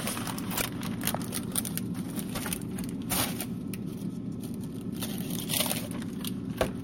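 At 0.56 to 0.62 s, damaged data in a compressed stream produces a brief glitch. Corrupted bytes made the decoder misread those frames and lose sync until it found the next frame header.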